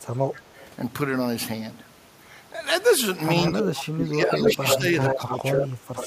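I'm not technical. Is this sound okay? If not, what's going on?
No. There are two problems with this speech.

The first is echo leak. The far end was likely playing the call through a loudspeaker, and its echo canceller let some of that sound slip back down the line. You hear a delayed copy of the speech: faintly at 0.57 to 0.66 seconds, about 129 milliseconds late, then about 74 milliseconds late at 4.48 to 4.78 and 5.06 to 5.68, where it's nearly as loud as the original, and more quietly from 5.96 seconds to the end.

The second is speech suppressed in double talk. When both people spoke at once, the echo canceller likely couldn't tell the talker apart from the loudspeaker echo and turned everything down. Between 3.42 and 4.86 seconds, roughly a second of speech dips sharply or drops out in pieces, and it happens again more briefly around 5.15 to 5.45 seconds.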